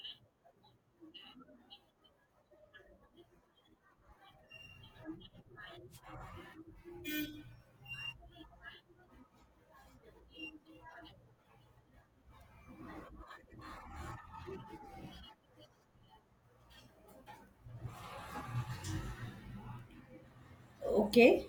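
A wireless microphone noise hit occurs from 5.9 to 6.01 s. The radio link from the analogue FM transmitter briefly fades as reflected signals cancel. The receiver's noise floor surges through for about a tenth of a second as a short burst of static over the speech.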